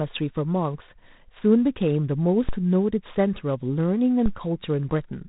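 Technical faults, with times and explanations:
Throughout, G.726 ADPCM: each sample is coded as a coarse difference from an adaptive prediction. The rasping hiss that rises and falls with the speech level fits the 24 kbit/s rate, where too few bits remain per sample. Nothing passes above 3.8 kHz.
2.49 s and 4.26 s, DC step: the waveform's zero line jumps abruptly, then the offset drains away as a 5 Hz high-pass pulls it back toward zero. Each jump is heard as a brief low thump beneath the speech, which carries on unchanged.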